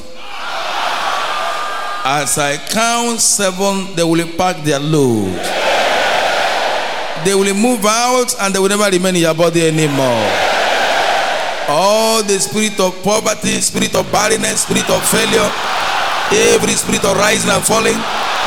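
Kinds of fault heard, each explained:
Block size mismatch (truncated): each block's tail gets dropped, giving a 54.4 Hz buzz and audio running 1.16 times fast at normal pitch, from 13.14 s.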